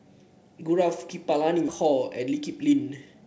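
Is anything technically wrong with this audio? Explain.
Yes, there are two faults in this speech clip.

At 1.68 to 1.70 s there is a skip ahead. The speech lurches forward with no pause at all, and the sound on either side of the jump butts straight together, so a piece of speech is simply missing, roughly 0.7 s of it. A stretch of audio was discarded, either lost in transit or dropped by an overfull jitter buffer, while later audio was already queued. Playback resumed from that later audio immediately.

From 1.84 to 3.22 s the jitter buffer speed-up takes over. The speech runs at about 115% of normal speed while the pitch stays where it was, so it sounds rushed rather than chipmunk-like. The buffer was holding more audio than its target, so the receiver kept snipping out short pitch-period-sized pieces in quick succession. In total that trimmed something like a fifth of a second and pulled the delay back down. 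Throughout, the call path's codec leaves nothing above 8 kHz, which fits a G.722 wideband link.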